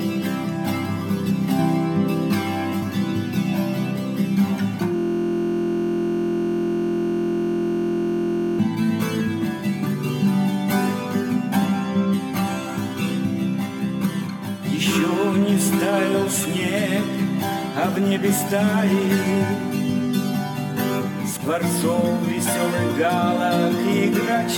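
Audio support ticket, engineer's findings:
System hang loop, 4.96–8.59 s: steady 43.1 Hz buzz. Host or driver froze while the hardware replayed one 23.22 ms block, consistent with a 1024-sample ring buffer. Exact identical repeats, not gaps or dropouts, so it buzzes rather than stutters.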